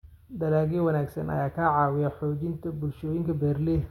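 No audible technical faults here.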